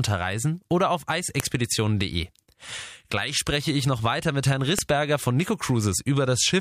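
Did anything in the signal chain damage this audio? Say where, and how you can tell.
Yes: WAV file headers left in when pieces were joined at storage played as samples, giving sharp clicks at 1.40 s, just after "oder auf", and 4.79 s.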